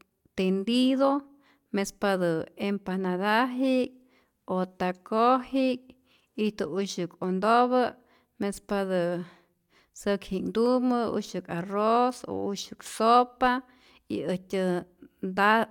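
Nothing technically wrong turns up anywhere in this speech recording, so there are no fault times or causes to point to.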